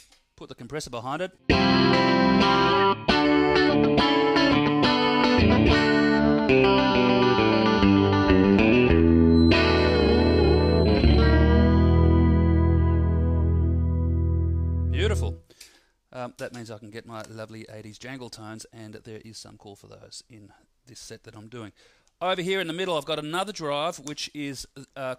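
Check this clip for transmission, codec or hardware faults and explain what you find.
One fault stands out, a feedback whistle. From 9.25 to 11.42 s a thin, steady tone at 4.1 kHz sits behind the sound, roughly 20 dB below it. It swells and fades slowly in level before it stops. The likely cause is a loudspeaker-to-microphone loop with gain right at the edge of instability. One frequency keeps recirculating and holding itself up without tipping into full runaway howl.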